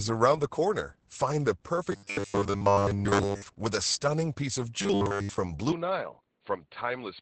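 Speech runs through Opus voice compression for the whole clip. At 10 kbps in SILK mode the band stops at about 8.6 kHz, and the coarse excitation coding leaves the voice muffled, hoarse and faintly robotic. On a spectrogram this appears as a hard ceiling near 8.6 kHz with smeared, grainy harmonics beneath it. From 1.92 to 3.42 s and again from 4.82 to 5.38 s, the sound turns into a rigid metallic buzz at 100 Hz. This is robotic sound from repeated short buffers, likely caused by the same 10 ms of audio being looped in place of most of the real signal. A spectrogram shows evenly spaced 100 Hz harmonic lines, and the waveform repeats one identical cycle. From 5.72 s to the end, the input likely switched to a poorer device with no gap. The sound dulls, the band narrows, and the level drops by roughly 5 dB. A new noise floor sits around 55 dB down, visible as an abrupt lower spectral ceiling and a smaller waveform.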